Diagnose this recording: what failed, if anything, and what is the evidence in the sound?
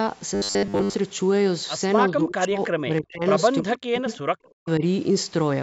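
From 0.35 to 0.94 s the speech turns into a rigid, metallic buzz fixed at 100 Hz, still loosely tracking the speech. This is likely robotic sound from repeated short buffers at the driver or buffer stage: a 10 ms block replayed over most of that span while fresh audio was skipped.

At 2.08 to 3.25 s, 3.62 to 4.08 s and 4.48 to 4.83 s the speech dips sharply and cuts out in pieces, falling by about 35 to 40 dB at its deepest. This points to speech suppressed in double talk in the call processing, likely the echo canceller ducking the talker while both sides spoke.

At 4.10 to 4.18 s a faint delayed copy of the speech surfaces, about 25 dB below it and trailing by 316 ms. That is an echo leak in the call processing, likely loudspeaker pickup that the far side's echo canceller failed to remove and sent back.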